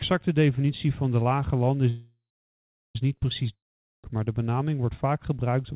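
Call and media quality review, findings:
Call audio freeze, 1.89–2.96 s: last sound stretched into a fading buzz, then about 0.73 s of silence. Speech resumes exactly where it stopped, nothing lost, but playback now runs about 1.06 s late. Likely jitter buffer underrun from delayed packets.

Long network dropout, 3.54–4.04 s: similar fading fill decaying into about 0.46 s of silence. Unlike the freeze, about 0.5 s of speech never returns, and the audio picks up further on, skipping ahead. Likely packets lost outright, not merely late.

Path band-limited at 4 kHz throughout, consistent with G.711 mu-law narrowband coding.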